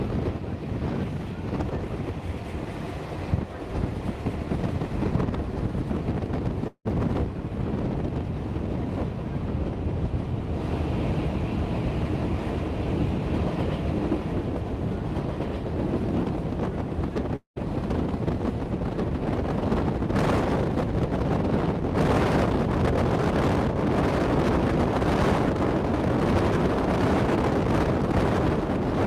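A doubled audio track runs throughout: an identical full-band copy trails about two seconds behind at roughly equal level, likely from a second, slower capture path.

Long network dropouts occur at 6.67–6.87 s and 17.36–17.58 s. The last sound smears into a fading buzz, then a gap of 70 and 120 ms, likely from lost packets, with about 180 and 200 ms of audio gone.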